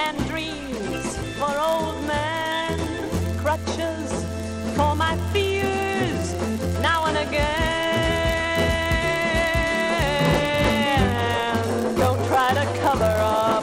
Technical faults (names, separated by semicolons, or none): block size mismatch (padded)